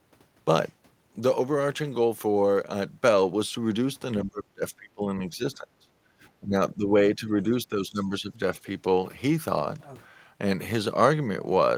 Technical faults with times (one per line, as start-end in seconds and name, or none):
4.24-5.89 speech suppressed in double talk
6.41-8.33 speech suppressed in double talk